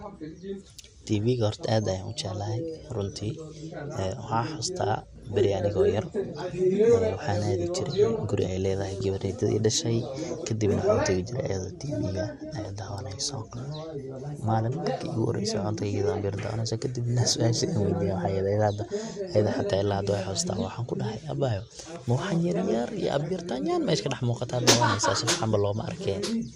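From the start, the speech has a dull, plainly gurgly, grainy character that never lets up. That points to MP2 compression as the likely cause, at a rate that sounds like it's around 80 kbps. Layer II splits the signal into 32 sub-bands and shares out the bits. At this rate the top bands get dropped or flicker in and out, and what's left is quantised coarsely, so the highs lose their air and a granular edge sits on everything.

Near the end, from about 24.15 to 24.24 s, there's a short patch of DAB burbling, a quick burst of blips over the speech. It's what you get when transmission bit errors, at a rate of something like a fifth of a percent, slip past error correction into the MP2 data. Corrupted samples put short blips of noise in single sub-bands, and corrupted scale factors make sub-bands jump in level for up to a frame. Six frames are hit.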